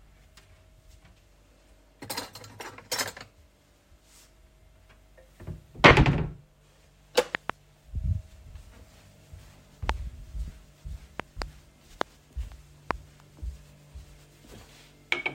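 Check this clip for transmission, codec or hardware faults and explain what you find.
The clip of everyday sounds has two kinds of fault: short dropouts from lost LE Audio frames and a series of loud pops.

Lost LE Audio frames occur at 5.88 to 5.91 s and again at 10.48 to 10.50 s. When frames fail to arrive over the Bluetooth LE Audio link, the LC3 decoder fills the gap by repeating the last good spectrum with randomised signs. The first gap lasts 30 ms, which fits three 10 ms frames, and the second lasts 20 ms. Both are too short for the fade-out to take hold, so each is heard as a brief noisy smear that replaces the sound rather than as a silence.

Loud pops appear at 7.35 to 7.52 s as two pops, at 9.89 to 9.92 s as one, at 11.20 to 11.44 s as two, at 12.01 to 12.03 s as one, and at 12.91 to 12.93 s as one. Each is a sharp transient of about 20 to 25 dB above the surrounding sound, and the sound carries on underneath it. 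The likely cause is a voltage step or pulse from a connector, switch, static discharge or driver glitch, which the downstream circuits shape into a short thump.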